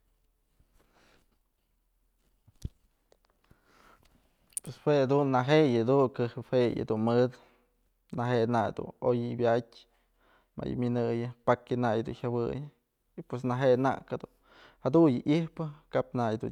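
No dropouts, clicks, distortion or level jumps turn up anywhere in the recording.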